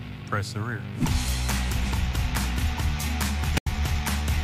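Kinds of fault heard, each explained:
Corrupt frame decoded: from 3.57 to 3.67 s, a tenth of a second near the end, a short, harsh burst cuts through the sound. Damaged bits inside the compressed data reached the decoder, which played them rather than concealing them. Misread gain and spectral values put energy where none belongs, across what sounds like a handful of consecutive frames. The result is a squeaky, noisy blip peaking fairly loud, around -10 dBFS.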